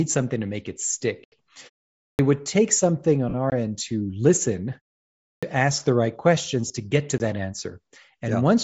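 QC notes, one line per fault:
Throughout: Bluetooth LC3 compression, plainly audible, likely from a low-rate LC3 link near 32 kbps, so the upper band is noise-filled and the speech sounds breathy and grainy.
0.88, 3.29–3.35 and 6.68–6.70 s: lost LE Audio frames, about 20 ms, 50 ms after "would take something", then 20 ms, where the decoder re-used the last spectrum and it smeared into noise.
1.24–1.32, 3.50 and 7.18 s: block of digital silence, an 80 ms hole then two 20 ms gaps, the last after "questions to get to". Each is a hard cut to silence.
2.01–2.19 and 5.23–5.43 s: clipped start after a pause, roughly 180 and 196 ms swallowed after 0.4 and 0.5 s gaps. The second sits between "end to listen" and "ask the right questions" and starts abruptly while the output wakes up.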